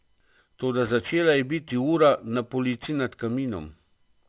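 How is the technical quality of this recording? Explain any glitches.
The recording has a clear fault: aliasing runs through the entire clip. This speech was downsampled without an anti-aliasing filter, and the result points to a drop from 48 kHz to an 8 kHz rate. Everything above the new 4 kHz limit folds back down into the band as false, unrelated frequencies, sitting roughly 25 dB under the speech. Sibilants come out gritty and metallic, and the spectrum stays dense right up to the 4 kHz edge instead of rolling off.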